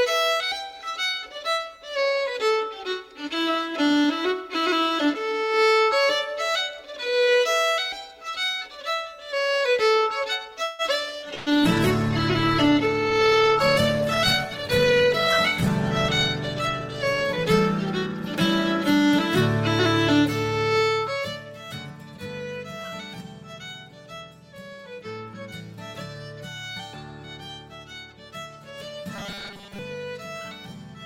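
From 10.63 to 10.82 s the sound stalls for about 150 ms, continuing as a fading buzz or hiss. Then it picks up exactly where it stopped, with nothing lost. That is the mark of a call audio freeze: the likely cause is packets held up in transit, so the jitter buffer ran dry and the receiver stretched the last sound to bridge the wait. Unlike packet loss, the gap is inserted rather than cut out, and the whole stream ends up about 154 ms later.

At 11.21 to 11.25 s comes a short concealed packet loss, a quick smear or wobble. About 60 ms of audio never arrived, and only around 16 ms of continued sound papers over the hole before the real signal blends back in. It is far briefer than a freeze and removes material instead of adding delay, pulling the timing back by roughly 40 ms.

From 11.22 s the call bitrate drop begins. The encoder was pushed from 96 kbps down to 15 kbps, stayed at its lowest for about 4.6 s, and recovered by 20.07 s. 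Coarse coding makes the sound rough and watery through this stretch, and the narrower bandwidth dulls the top end. Unlike the momentary dropouts, this colouring is continuous and lasts many seconds.

Between 11.34 and 11.62 s a burst of packet loss leaves about 120 ms missing. The receiver covers roughly 117 ms of it by carrying the last sound forward and letting it fade, so it comes out as a held buzz or dying hiss. The audio then resumes further along. This is a much longer hole than the wobble at 11.21 s, and unlike the freeze, content is actually gone.

Two jitter buffer speed-ups follow. From 14.58 to 15.06 s the sound runs at about 108% and sheds roughly 50 ms. From 16.54 to 18.26 s it runs at about 105% and sheds roughly 100 ms. The receiver drains excess buffered audio by cutting out tiny pitch-period slices, so the pace hurries while the pitch stays put. That is what separates it from a plain playback-rate change, which would raise the pitch as well.

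From 29.16 to 29.79 s the sound turns into a rigid metallic drone at about 200 Hz, which matches a 5 ms chunk being replayed over and over. This is robotic sound from repeated short buffers, most likely from audio arriving too seldom, with the software repeating its last few milliseconds while roughly 70% of the real signal is skipped. The fixed buzz pitch, independent of the material, is what identifies it, as opposed to coarse coding.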